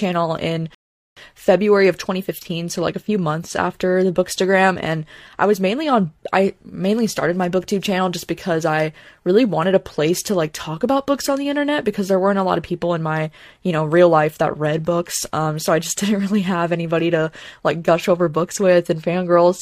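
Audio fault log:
0.75–1.17 s, rebuffering stall: the speech cuts to dead silence for about 0.42 s, then picks up exactly where it left off. The player ran dry of downloaded audio and had to wait for more, so nothing's missing, the clip just gets longer.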